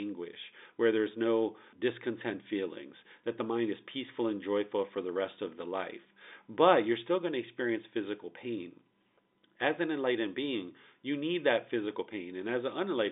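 Nothing here goes wrong: the speech comes over as an ordinary telephone line, G.711 A-law with its narrow band running up to about 3.8 kHz, and no faults turn up anywhere along the way.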